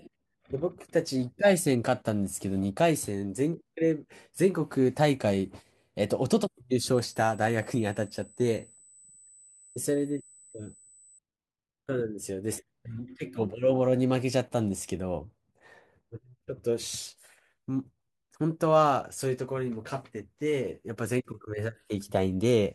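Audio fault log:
6.95 to 11.19 s, USB whine: a thin, steady tone at 8 kHz sits under the speech for just over four seconds, then stops. Its pitch never moves. It stays about 30 dB below the speech. That pitch matches the USB bus's 125-microsecond microframe rate. Each microframe pulls a burst of current, and the ripple leaks into the audio through a shared power or ground path. The result is a fixed high whine.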